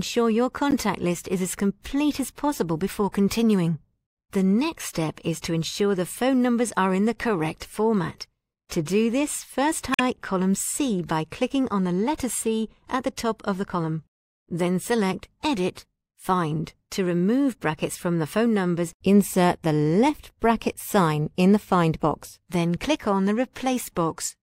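Short glitches at 0.71–0.74 s and 9.92–10.0 s come from damaged data in a compressed stream: corrupted bytes make the decoder misread frames and resynchronise.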